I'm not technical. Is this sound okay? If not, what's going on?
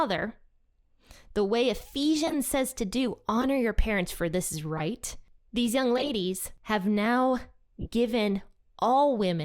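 No. The speech has five short glitches, each a corrupt frame decoded: a chunk of compressed data was damaged, and the player played it anyway instead of discarding it, so it came out as a chirp or burst of noise. They occur at 2.27–2.34 s, 3.41–3.45 s (between "says to do" and "your parents for this"), 4.77–4.82 s (after "parents for this is"), 5.97–6.10 s (the longest), and 7.82–7.87 s (after "have now").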